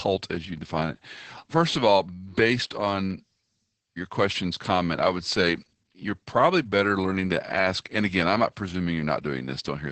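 Opus voice compression runs through the whole clip. The damage is heavy. Nothing remains above 8.6 kHz, so the speech sounds muffled. The linear-prediction coder renders the excitation coarsely, giving a hoarse, slightly robotic quality. This fits SILK near 10 kbps.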